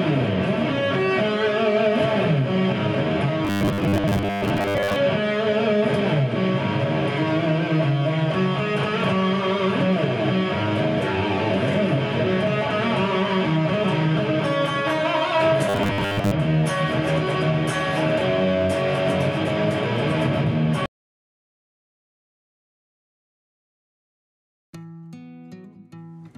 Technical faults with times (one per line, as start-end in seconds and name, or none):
3.45-4.96 robotic sound from repeated short buffers
15.69-16.31 robotic sound from repeated short buffers